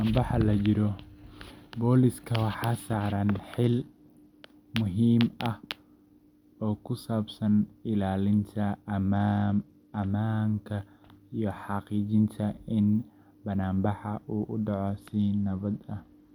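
Three Bluetooth SBC bit pool drops dull this speech: from 3.64 to 4.46 s, ending just before "muhiim ah"; from 9.11 to 10.10 s, right after "oo ku saabsan ilaalinta"; and from 14.87 s, after "uu u", through to the end. Each time the treble collapses and gritty quantisation noise rises, consistent with the bit pool falling from 28 to 13, near 102 kbps. A clean low-pass or hands-free profile switch would dull the sound without adding grit.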